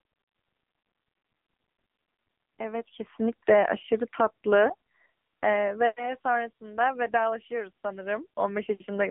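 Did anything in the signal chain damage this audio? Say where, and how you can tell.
Yes. The damage is at the codec stage and runs through the whole clip: this is the AMR narrowband mobile codec. The speech sits in a telephone band of about 200 Hz to 3.5 kHz, with nothing above 3.6 kHz, and it sounds heavily buzzy and synthetic. That points to AMR-NB at a low mode, consistent with about 6.7 kbps. The codec rebuilds speech from a vocal-tract model and a few excitation pulses, and at that rate too little detail survives.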